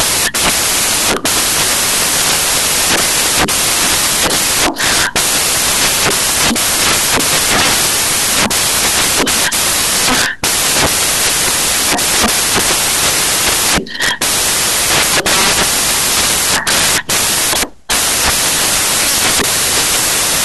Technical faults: samples built from the wrong bytes

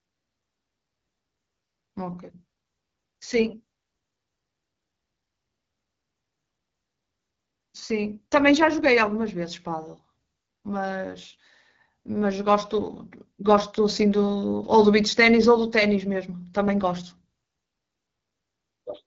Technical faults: AMR wideband (HD Voice) codec

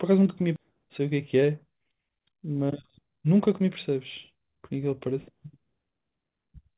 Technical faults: skip ahead; jitter buffer speed-up

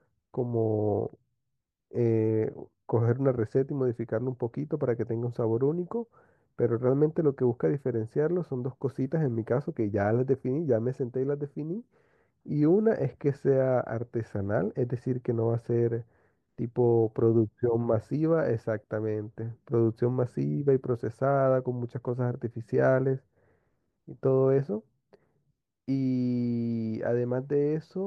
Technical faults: none

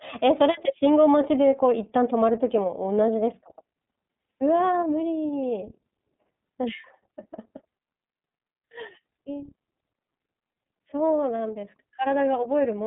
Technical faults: iLBC codec

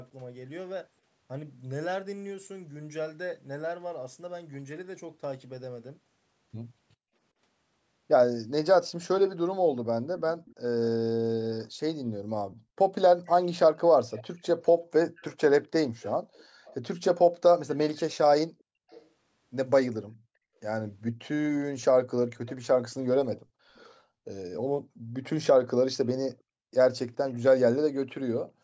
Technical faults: echo leak

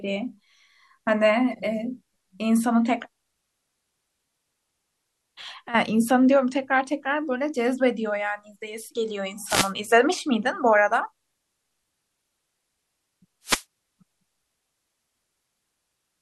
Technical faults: wireless microphone noise hit

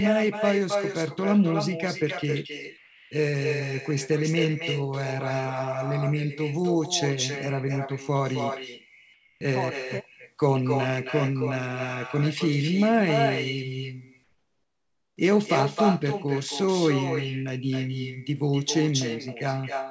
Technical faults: echo with no canceller; comfort noise in place of the background

